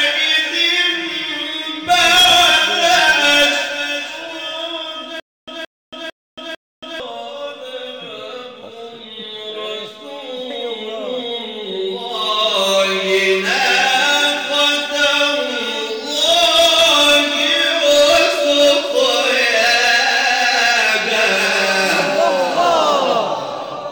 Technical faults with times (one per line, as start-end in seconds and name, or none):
5.20-7.00 stutter with silent gaps